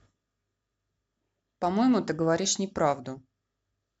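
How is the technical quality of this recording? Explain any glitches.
No glitches can be heard in this recording. Nothing in the speech points to a technical fault at any moment.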